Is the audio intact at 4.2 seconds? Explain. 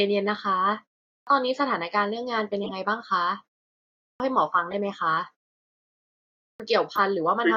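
No. A clipped start after a pause runs from 4.07 to 4.20 s: after 0.67 s of silence the output device was still waking, so about 130 ms of speech is swallowed and it begins abruptly. Unlike muted pauses, which only drop background, actual speech is lost here.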